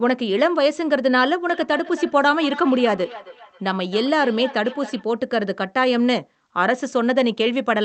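Feedback echo between two devices runs from 1.49 s to 5.05 s in this speech clip. Each stretch of speech returns roughly every 300 ms, its loudest repeat about 16 dB below the direct speech. This happens when two devices in one room share a call: one plays the other's microphone feed, that microphone picks it up again, and neither echo canceller removes sound it didn't play. The call path itself is band-limited to about 8 kHz.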